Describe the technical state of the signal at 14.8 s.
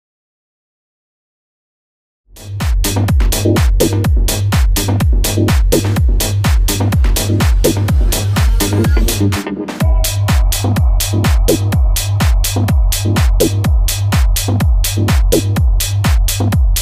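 At 14.8 s the signal is intact, with no dropout, click, distortion or level disturbance audible.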